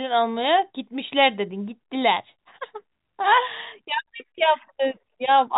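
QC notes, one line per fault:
No faults found.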